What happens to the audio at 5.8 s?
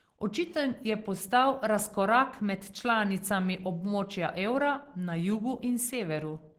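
At 5.8 s, as throughout the clip, the sound points to Opus compression at a low rate around 16 kbps, likely in its hybrid speech mode, where too few bits force bands to be filled rather than coded. The speech comes out plainly muffled, hoarse and grainy.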